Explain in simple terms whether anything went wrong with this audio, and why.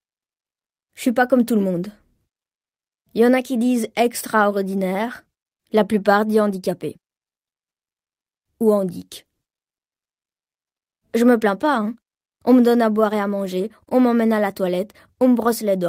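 Nothing went wrong here: the recording runs without any dropout, glitch, distortion or other transmission or processing fault anywhere in the speech.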